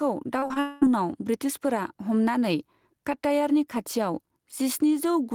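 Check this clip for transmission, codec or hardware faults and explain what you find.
Three kinds of fault are audible, all on this speech clip: gain pumping throughout, a cluster of short concealed packet losses near the start, and a long network dropout straight after them.

Gain pumping runs the whole length. The level moves by around 5 dB, so loud and quiet passages sit closer together and the speech sounds squashed and breathing. The likely cause is input gain set too high for the microphone, with a fast limiter or compressor clamping down on every peak and releasing in the gaps.

Short concealed packet loss shows up three times in quick succession, at 0.39 to 0.44 s, 0.48 to 0.52 s and 0.54 to 0.58 s. Each is a brief smear or wobble in the speech, where the sound seems to hang for an instant and then blend back. About 20 ms of audio failed to reach the decoder each time, and the receiver papered over the hole by extending the preceding sound, pitched if voiced and noise-like if not.

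A long network dropout follows immediately, from 0.60 to 0.83 s. The sound turns into a sustained buzz or hiss carried over from the last speech for just over a fifth of a second, with no true silence, and the speech then resumes with that stretch missing. This likely comes from a network stall that delivered nothing for about 0.22 s, which the decoder's concealment filled by continuing and fading the previous sound.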